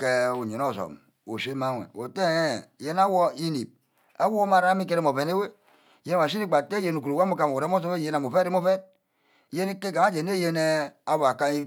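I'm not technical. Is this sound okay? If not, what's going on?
Yes, this speech recording sounds fine. There's no problem to point out at any moment in it.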